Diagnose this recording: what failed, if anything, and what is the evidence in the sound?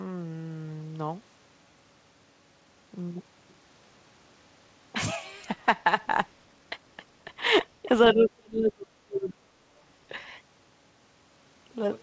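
Call processing: speech dips briefly at 7.83–7.89 s, then falls about 35 dB from 8.13 to 9.59 s, leaving a near-empty spectrogram gap. This is likely speech suppressed in double talk by the echo canceller.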